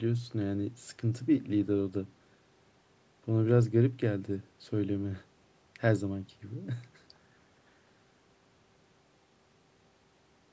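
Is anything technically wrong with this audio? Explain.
No, this speech signal shows no technical faults, with its band ending at about 8 kHz and its lowest bass trimmed by the high-pass filter of normal call microphone processing.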